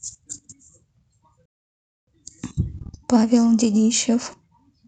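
At 1.46 s the speech drops abruptly to silence and stays silent until 2.07 s, a rebuffering stall of about 0.62 s. The player exhausted its downloaded audio and halted playback while waiting for more data. When the buffer refilled, the speech resumed at the exact point where it stopped, so no audio is missing. The interruption only inserts a gap, stretching the overall timing by roughly six tenths of a second.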